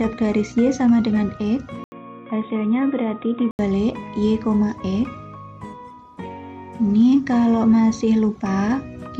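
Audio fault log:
1.84–3.59 s, input switched to a poorer device: after an 80 ms silence the sound turns dull and boxy with nothing above 3.8 kHz, drops about 5 dB, and gains a new noise floor roughly 35 dB down, likely from a narrower-band microphone taking over, before clearing again.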